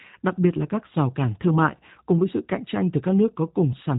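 From start to finish the speech carries G.729 codec damage, plainly audible. The codec rebuilds each 10 ms frame from a vocal tract filter, a pitch predictor and a sparse set of pulses, discarding the original waveform detail. The result is intelligible but rough and faintly synthetic. Nothing above 3.8 kHz survives, so sibilants lose their crispness. The texture fits an 8 kbit/s G.729A stream.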